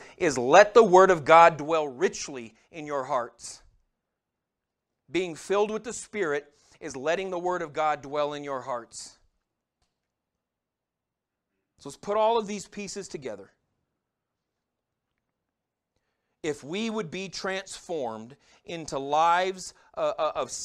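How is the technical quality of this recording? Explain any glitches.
The recording has one glitch: a burst of zipper noise in the speech from 1.49 to 1.87 s, just before "richly in your hearts". A gain drop of about 10 dB was applied in coarse, unsmoothed steps, around a hundred per second, rather than as a continuous ramp. Each jump puts a small discontinuity into the waveform, so while the level falls you hear a fast ticking, zipping texture riding on the speech instead of a clean fade.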